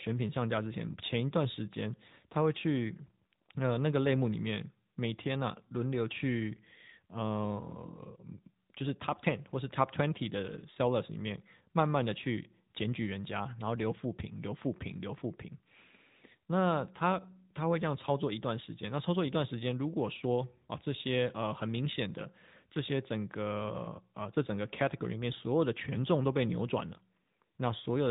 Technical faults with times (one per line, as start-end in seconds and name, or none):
0.00-28.11 AMR narrowband mobile codec